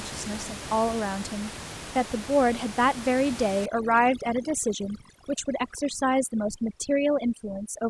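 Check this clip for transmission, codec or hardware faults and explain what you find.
One fault is present: overdone noise removal from 3.66 s to the end at 7.89 s. The room noise sits about 13 dB below the speech. A noise reducer set too strong shuts off bands near its noise estimate, leaving near-silent gaps with twinkling specks. On a spectrogram this shows as scattered isolated dots and holes.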